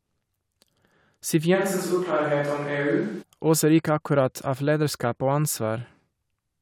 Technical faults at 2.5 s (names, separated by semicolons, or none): switch to a distant microphone